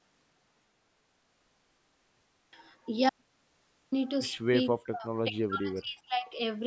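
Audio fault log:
4.67–6.35 s, speech suppressed in double talk: the voice drops out in patches, as much as 40 dB down, likely from the echo canceller ducking everything while both sides overlapped.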